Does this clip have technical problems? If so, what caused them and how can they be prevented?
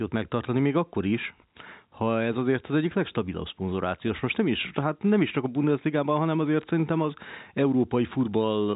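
Yes. At 4.08 s, packet loss with pitch repetition replaces 10 ms of lost audio, likely one dropped packet, with a repeated pitch period that sounds like a brief buzzy hold. Prevent it with a larger jitter buffer or forward error correction.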